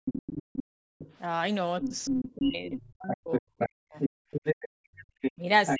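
A speech clip with echo-canceller trouble. The other side's voice leaks through from 0.05 to 1.14 s, a little below the talker's level, and again from 1.82 to 5.77 s at roughly equal loudness, likely because the loudspeaker playback was not fully removed from the microphone. The background is gated by the echo canceller from 0.64 to 0.98 s and from 4.68 to 5.07 s, with the room sound dropping by about 40 dB while the loudspeaker plays. Speech is suppressed in double talk from 1.8 to 4.1 s, with deep dips adding up to about two seconds, and more mildly from 5.35 to 5.8 s. The likely cause is the canceller turning down the talker along with the overlapping far-end voice.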